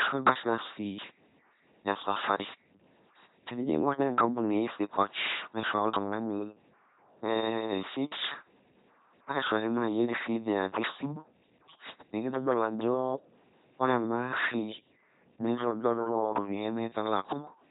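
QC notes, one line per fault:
throughout, LPC-10 vocoder: the speech is a harsh, buzzing robot voice with no natural breathiness, sometimes buzzing where hiss belongs or hissing where a buzz belongs, and nothing at all above 3.9 kHz. Each moment is rebuilt by exciting a simple vocal tract filter with either a pulse train or noise, never a blend, so any wrong voicing choice is heard outright. The heavy damage fits a 2.4 kbit/s LPC-10 stream.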